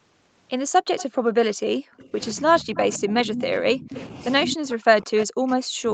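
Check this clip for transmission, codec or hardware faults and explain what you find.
Two faults stand out: a leaking echo canceller and speech suppressed in double talk. Both sit on top of a call path whose 8 kHz band limit fits Opus coding.

Echo leak at 0.97–1.15 s, 1.97–2.10 s, 3.32–3.44 s, 3.94–4.05 s, 4.46–4.50 s and 5.19–5.23 s. The far end likely plays the call on a loudspeaker, and its echo canceller lets part of the pickup return. Each burst is a copy of the speech 160 ms late, about 10 to 30 dB below it, heard as short ghost scraps.

Speech suppressed in double talk, from 1.79 to 4.15 s (roughly 1.5 s affected in total) and from 4.46 s to the end. When both sides speak together, the echo canceller likely cannot separate its own talker from the loudspeaker echo and turns everything down. The speech dips and drops out in pieces, by about 25 dB in the first stretch and about 40 dB in the second, sounding choked or briefly missing.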